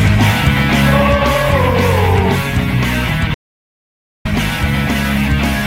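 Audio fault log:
3.35–4.25 s: audio dropout to silence. The sound cuts off mid-flow and returns about 0.91 s later. The gap is silent with no room tone, likely from the input link failing while recording continued. The waveform goes flat and the spectrogram shows a blank column.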